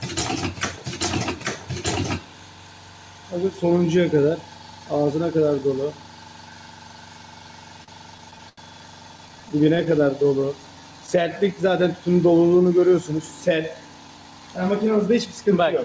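From 7.84 to 8.59 s there are repeated stalls (stutter): the jitter buffer ran dry five times as packets arrived late, and the receiver stretched the last sound to fill about 151 ms, the longest gap 84 ms. A second burst from 9.17 to 10.45 s has twelve shorter gaps of up to 15 ms, totalling 122 ms. Nothing is lost, but the sound catches and drags.

Overlapping this, a jitter buffer slow-down runs from 9.98 to 11.67 s. The receiver repeated pitch periods to rebuild its reserve, adding 138 ms and playing at 92% speed. Sounds come out drawn out at unchanged pitch.

From 13.74 to 15.41 s a jitter buffer speed-up trims short pitch-period pieces, roughly a fifth of a second in total, to cut excess delay. Playback runs at 111% with the same pitch and sounds hurried. The band stops at 8 kHz throughout, which fits a G.722 call codec.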